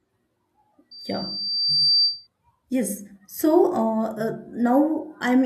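From 0.91 to 2.27 s there's loudspeaker feedback squeal, a 4.7 kHz tone looping through mic and speaker, swelling over about a second to sit a bit above the speech.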